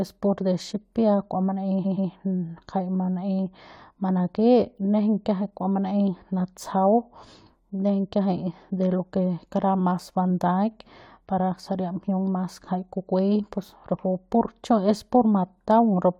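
At 1.81 s the speech stutters from repeated frames. A 128 ms run of compressed frames plays two extra times, adding 256 ms. A waveform shows the identical chunk copied end to end, and the spectrogram shows matching patterns repeating until 2.07 s.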